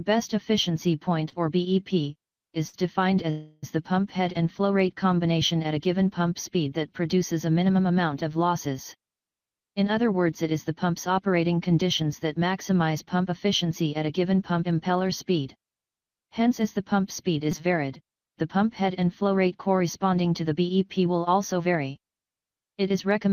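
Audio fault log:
1.29–2.82 s, repeated stalls (stutter): four brief gaps, longest 61 ms, were bridged by continuing the last sound as late packets left the buffer empty, so the audio drags.
3.30–3.65 s, call audio freeze: a 0.33 s hold where the last sound is stretched out, likely from packets held up in transit emptying the jitter buffer, then the audio resumes where it stopped.
9.60–10.91 s, jitter buffer speed-up: about 8 % faster at unchanged pitch as the receiver trimmed short pitch-period pieces, roughly a tenth of a second in all, to shed excess delay.
15.29–18.88 s, jitter buffer speed-up: about 6 % faster at unchanged pitch, with around 0.2 s of short pitch-period pieces removed to shrink an overfull buffer, leaving the passage sounding hurried.
17.52 s, repeated buffer: a tiny piece, around 5 ms, played three extra times with hard joins when new audio came late, heard as a brief buzz that fits a 256-sample buffer.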